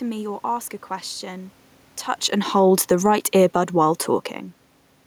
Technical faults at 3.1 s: automatic gain falling

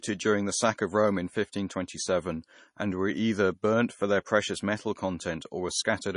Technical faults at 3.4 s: MP3 compression

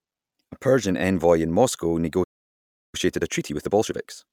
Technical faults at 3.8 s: time-compressed catch-up

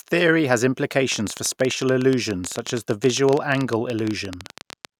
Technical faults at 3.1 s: train of clicks

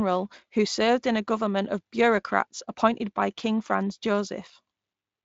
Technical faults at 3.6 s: none

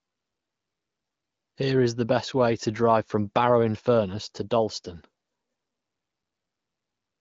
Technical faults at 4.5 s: none

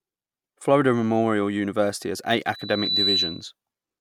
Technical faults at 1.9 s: none

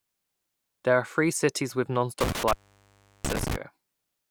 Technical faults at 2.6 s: intermittent contact

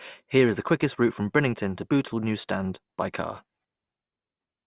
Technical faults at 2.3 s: none

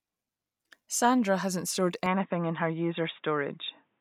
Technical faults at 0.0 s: none

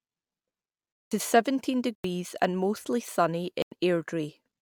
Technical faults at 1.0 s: block of digital silence

